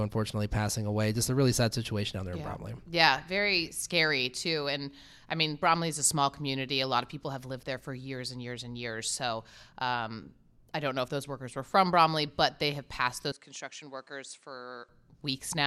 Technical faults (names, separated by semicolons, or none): input switched to a poorer device